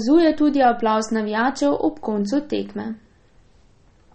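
Heavy MP3 compression is the likely cause of what runs through the whole recording. Starved of bits, the encoder has cut the treble off at about 8.3 kHz and dropped the weaker frequency lines, which flicker in and out from frame to frame. The damage is plainly audible, which fits a low bitrate of around 32 kbps: the speech sounds dull and watery, with a swirling, metallic edge on s sounds and smeared consonant attacks.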